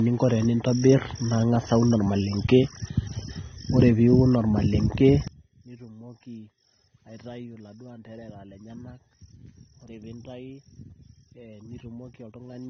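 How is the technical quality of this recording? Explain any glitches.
The technical quality is poor. The speech is band-limited throughout, and from 5.28 s to the end it almost vanishes.

Low-bitrate audio saved at a high bitrate: for the whole clip nothing is present above 6.3 kHz, so the sound is dull and smeared. The likely cause is an encode near 24 kbit/s, re-saved as high-bitrate MP3 that cannot restore what was lost. A spectrogram shows a flat ceiling at 6.3 kHz.

One channel inverted: from 5.28 s onward the level drops by about 22 dB, leaving only a faint residue. The likely cause is one stereo channel with reversed polarity, so the centred speech cancels when the channels are summed to mono. The waveform abruptly shrinks to a narrow sliver there.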